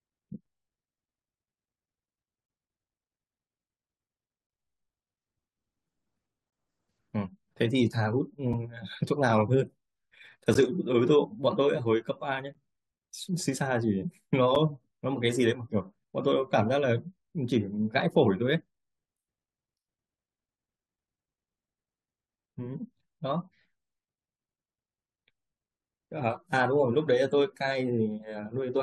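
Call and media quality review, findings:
Gap between stream segments at 0.46, 6.50–6.52, 8.53, 10.54, 12.54 and 14.55 s. Hard-edged silent holes of 5 to 23 ms in the speech, from 6.50 s on spaced about 2 s apart, fitting 2 s segments. Segment timestamps leave small gaps that the player fills with silence. No audio lost.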